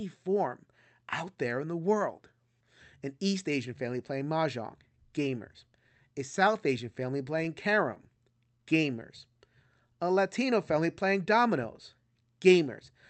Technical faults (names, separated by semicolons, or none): scattered short gaps; jitter buffer slow-down; jitter buffer speed-up